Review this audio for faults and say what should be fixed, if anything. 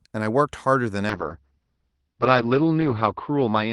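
A call bitrate drop starts at 1.11 s. Speech turns coarse and muffled, bandwidth shrinking from 12 kHz to 6 kHz, which fits a fall toward 7 kbps. Set a higher minimum encoder bitrate so a falling bandwidth estimate cannot push Opus this low.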